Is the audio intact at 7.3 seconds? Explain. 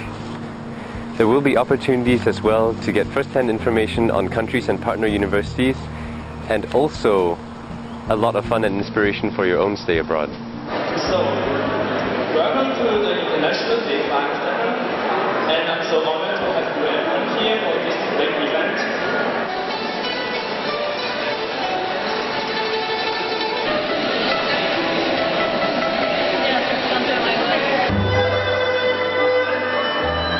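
No. At 7.3 seconds you're inside a stretch of imaging from linear upsampling that runs from the start to about 8.69 s. The sound sounds like it was raised from a 12 kHz rate to 44.1 kHz by joining samples with straight lines, which filters poorly. The top end is dulled just below 6 kHz, and a mirrored copy of the spectrum sits between 6 kHz and 12 kHz, roughly 35 dB below the signal, adding a metallic shimmer to bright, high-frequency content.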